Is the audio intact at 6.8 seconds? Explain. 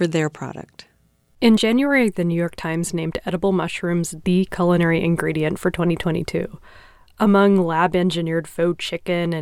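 Yes, the speech plays through cleanly at 6.8 s, with no fault at that moment.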